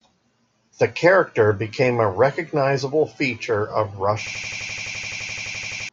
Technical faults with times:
4.27-5.89 system hang loop

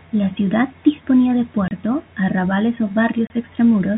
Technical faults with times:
1.68-1.71 packet loss filled with silence
3.27-3.30 packet loss filled with silence

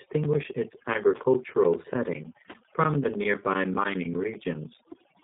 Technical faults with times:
0.00-5.24 overdone noise removal
0.00-5.24 G.729 codec
0.14-5.15 periodic USB or driver dropouts

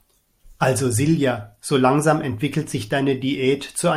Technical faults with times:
none

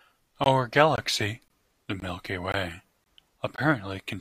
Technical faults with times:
0.44 gap between chunks
0.96-0.98 gap between chunks
1.48-1.50 gap between chunks
2.00-2.02 gap between chunks
2.52-2.54 gap between chunks
3.04-3.06 gap between chunks
3.56-3.58 gap between chunks

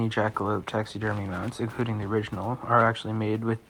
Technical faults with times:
none

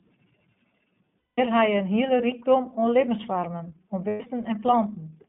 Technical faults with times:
0.00-5.28 iLBC codec
1.18-1.39 lost iLBC frames
4.08-4.21 lost iLBC frames

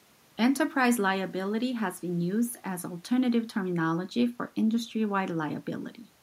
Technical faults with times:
none

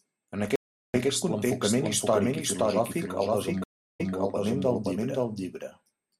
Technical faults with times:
0.00-6.20 doubled audio track
0.56-0.94 audio dropout to silence
3.64-4.15 stream reconnect

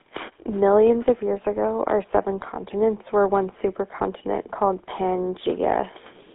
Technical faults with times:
0.00-6.34 GSM full-rate codec

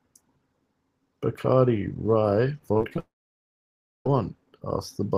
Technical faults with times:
2.73-2.98 repeated packet loss (robotic sound)
2.99-4.06 long network dropout

